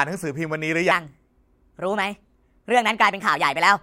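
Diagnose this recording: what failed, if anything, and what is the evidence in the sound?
A section at the wrong speed runs from 0.91 s to the end. The speech turns hurried and high, at 1.25 times speed and about four semitones up, likely from playback on a mismatched clock. On a spectrogram, harmonics and formants jump upward together, while the waveform visibly compresses in time.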